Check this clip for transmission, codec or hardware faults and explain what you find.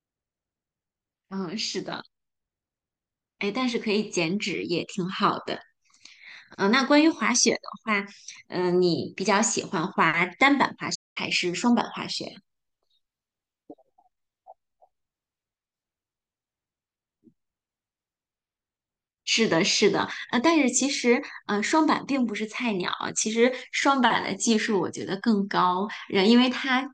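One fault is present, a playback stall. From 10.95 to 11.17 s the speech cuts to silence mid-flow for about 0.2 s, then resumes. This is likely the player starving for data or its output thread being blocked, leaving nothing to send until it recovers.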